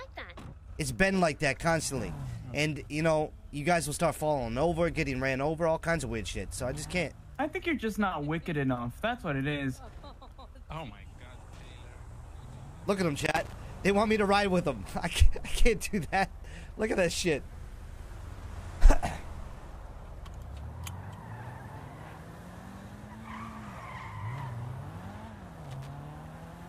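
At 13.25 s a burst of loose connector crackle breaks in, lasting until 13.53 s, and it returns from 25.65 to 25.87 s. Each time, a worn or dirty contact in the signal path is opening and closing rapidly, so the audio is chopped into fragments while any DC present on the line turns each make and break into a pop. The result is an irregular scratchy crackle of roughly a quarter second, riding over the sound.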